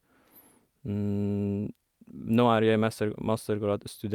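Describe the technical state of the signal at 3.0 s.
At 3.0 s the speech signal is intact, with no audible dropout, distortion, glitch or other fault at that point.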